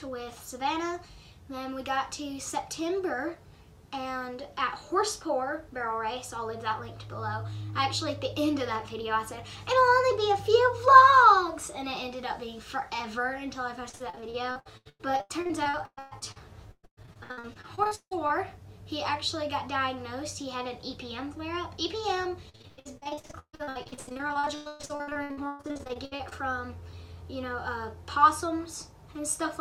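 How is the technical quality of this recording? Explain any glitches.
The recording has two bursts of repeated packet loss (robotic sound), from 13.89 to 18.31 s and from 22.49 to 26.33 s. In each stretch, dozens of short chunks of audio went missing, and each hole was patched by stretching the last good sound forward. That concealment covers about 39% of the first stretch and about half of the second, with the longest gaps at 160 ms and 137 ms. It sounds choppy, with pieces missing. A single dropout would be one clean hole. Here the holes keep recurring and are filled with repeats of the last sound rather than silence.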